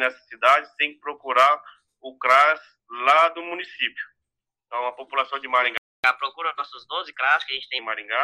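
At 5.78 s the audio cuts out abruptly in mid-flow and stays silent for about 263 ms, until 6.04 s, before sound resumes. This is a playback stall, most likely caused by the player running short of buffered data or having its output thread held up, so nothing reached the output until it recovered. From 6.04 s to 7.79 s the audio runs noticeably fast and sits higher in pitch, about two semitones up, then settles back to normal speed and pitch. This is catch-up at higher speed. Having fallen behind during the stall, the player resamples its backlog at 1.15 times normal speed. Because resampling shifts speed and pitch together, the whole passage sounds sped up and raised, and once the lost quarter-second or so has been made up, playback returns to its normal rate.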